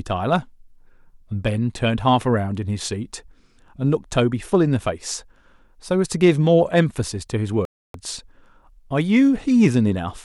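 A Bluetooth stall interrupts the speech from 7.65 to 7.94 s, where the sound drops to silence for about 0.29 s and then resumes. The cause is likely radio interference on the wireless link delaying packets until the headphones' small playback buffer emptied, leaving nothing to play until retransmitted data arrived. It is heard as a clean, abrupt gap in the speech.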